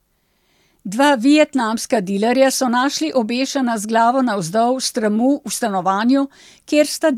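Speech recording with no audible technical faults anywhere in it.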